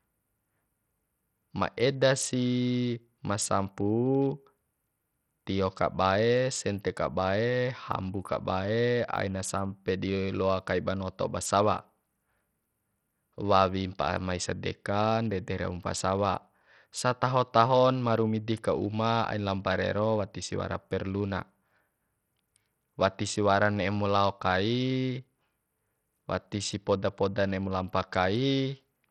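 Bluetooth SBC compression, likely the cause, runs through the whole speech clip. A starved bit pool leaves the upper sub-bands with almost no bits, so the treble flickers and drops out while gritty noise and aliasing ride on the speech, which fits a rate near 64 kbps.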